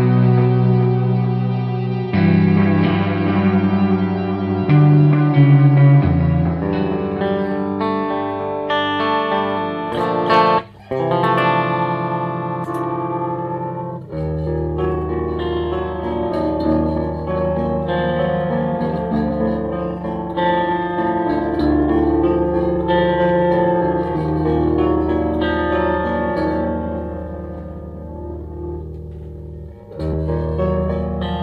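At 19.30 s and again at 30.12 s, compressed frames are skipped: about one 23.2 ms frame goes missing, so the audio jumps forward.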